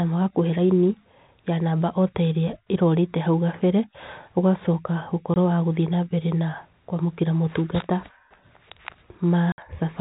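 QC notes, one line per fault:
5.34–5.36 s and 9.52–9.58 s, packet loss filled with silence: 20 ms and 60 ms gaps, fitting one and then three lost 20 ms packets, with hard edges; flat, silent waveform, blank vertical spectrogram bands.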